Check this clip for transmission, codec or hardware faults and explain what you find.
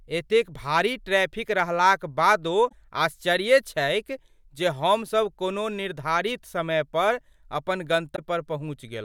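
Two short glitches come from one codec fault. At 2.68 to 2.73 s and 8.15 to 8.19 s, a likely broken MP3 bit reservoir: frames were lost, and the next frame took its borrowed bits from the wrong frame's bytes. The speech jumps ahead. The MP3 frames are 24 ms long.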